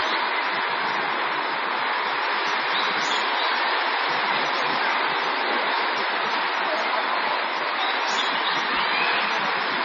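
MP3 compression damage runs through the whole clip: nothing is heard above 7 kHz, and the remaining detail swirls and turns watery as weak frequency components flicker on and off between frames. The heavy damage likely comes from MP3 encoding at a bitrate as low as 24 kbps.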